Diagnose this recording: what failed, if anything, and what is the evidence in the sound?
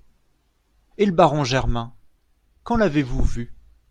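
Nothing failed in this recording, and the sound offers no evidence of any fault.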